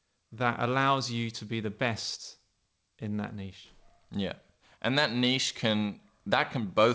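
Nothing stood out on listening to this speech, which came through a call path whose audio stops at about 8 kHz, as that codec is designed to do.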